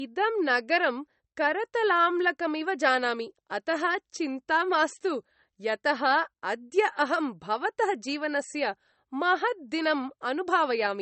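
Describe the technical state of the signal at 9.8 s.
At 9.8 s, as throughout, the speech is low-bitrate audio saved at a high bitrate, likely a low-rate MP3 re-encoded generously. It is dull and swirly, and a spectrogram shows a flat ceiling near 8.4 kHz.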